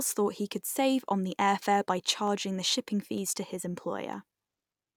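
Three single sharp clicks are heard at 2.28, 3.18 and 4.13 s, likely dropped samples, where a fraction of a millisecond is skipped and the waveform jumps abruptly.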